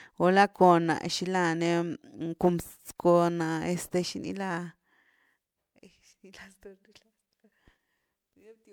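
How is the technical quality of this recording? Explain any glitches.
The recording is degraded throughout by generation loss. The speech sounds swirly, hollow and smeared for all of it, with consonant attacks blurred, and the likely cause is repeated MP3 encoding, around four passes at what sounds like 128 kbit/s. Each pass re-quantises on a shifted frame grid, so noise and spectral holes pile up. A single 128 kbit/s encode would sound cleaner. Here the band still reaches about 20.9 kHz, yet the damage is heavier than that bitrate explains.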